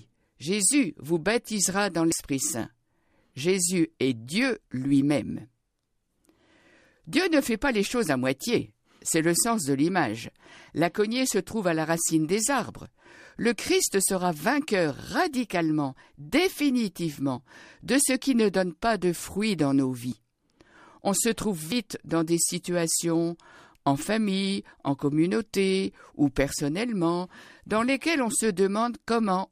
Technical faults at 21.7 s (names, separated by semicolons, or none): dropped buffer (overrun)